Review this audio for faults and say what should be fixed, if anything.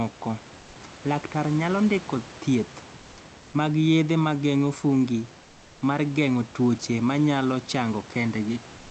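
The sender's voice detector likely treated the final pause as silence and switched to discontinuous transmission (Opus DTX), so from 8.77 s to the end at 8.91 s the receiver fills about 0.14 s with comfort noise in place of the background. The room noise, sitting about 23 dB below the loudest speech, gives way to a smooth, featureless noise about 1 dB quieter, losing the texture of the real room. To prevent this, disable DTX on the sending side, or make the voice detector hold transmission open longer after speech ends.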